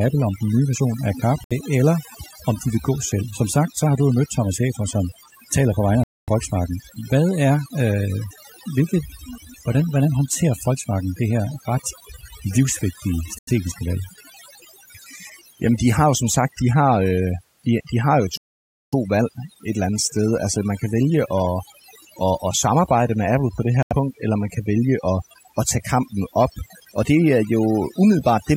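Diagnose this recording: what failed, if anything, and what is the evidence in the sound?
Overdone noise removal sits in the processing stage: a noise reduction stage set far too aggressively ran across the whole recording. It pulled down any frequency band it judged close to the noise floor, and the quieter parts of the voice fell below that threshold too. The result is a background gated to near silence with small twinkling artefacts.

The gaps point to a playback-side failure, most likely a Bluetooth stall, where interference delayed packets and the headphone buffer emptied before retransmissions arrived. The audio drops to silence five times: about 65 ms at 1.44 s, 245 ms at 6.04 s, 90 ms at 13.38 s, 553 ms at 18.37 s and 83 ms at 23.83 s. Each dropout ends abruptly as the sound continues, matching a buffer that ran dry and refilled.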